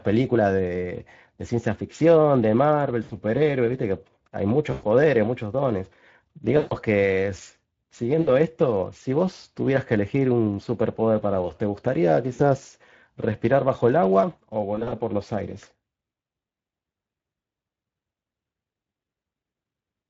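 The Speex codec at about 20 kbps leaves the speech throughout plainly hoarse and noisy, with little detail in the excitation. Packet loss concealed by the speech codec causes dropouts at 3.03, 4.71, 6.57, 8.21, 12.33 and 14.75 s, each 60 to 140 ms long. The decoder extrapolates the last sound into a fading buzz or coloured noise.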